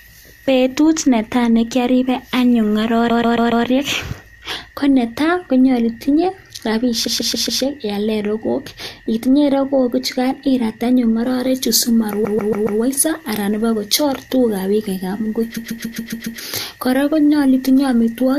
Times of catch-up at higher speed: none

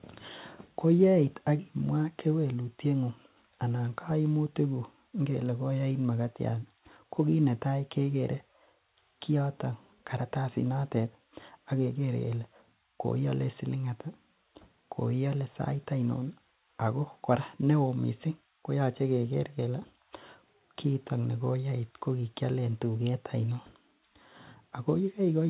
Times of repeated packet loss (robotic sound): none

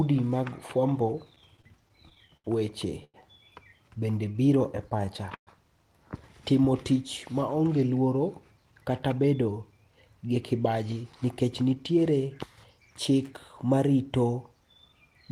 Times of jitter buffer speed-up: 8.57-12.11

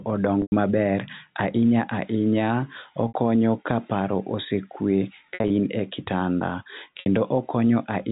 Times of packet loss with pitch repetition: 0.42-0.52, 3.08-3.14, 5.34-5.50, 7.00-7.06

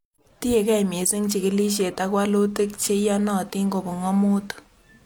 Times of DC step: none

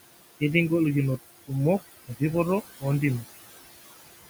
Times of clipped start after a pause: none

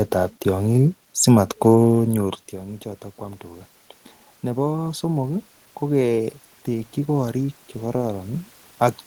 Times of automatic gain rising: 2.11-3.73, 4.42-8.56

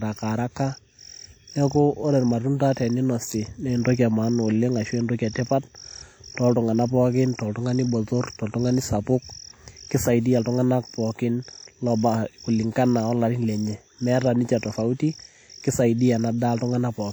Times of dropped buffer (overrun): none

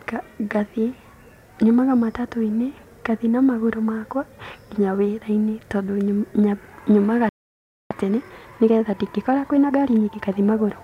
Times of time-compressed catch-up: 7.91-10.35

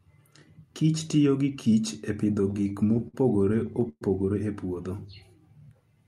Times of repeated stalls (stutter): 2.41-4.03

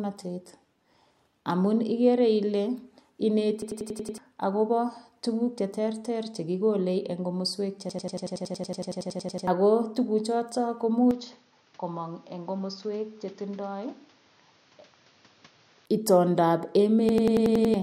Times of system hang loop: 3.62-4.18, 7.89-9.47, 17.09-17.74

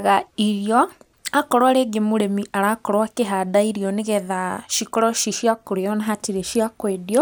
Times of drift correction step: none

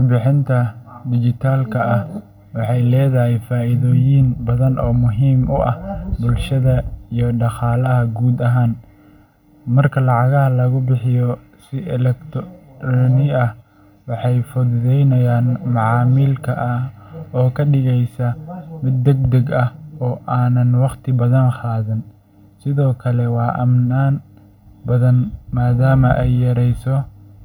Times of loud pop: none

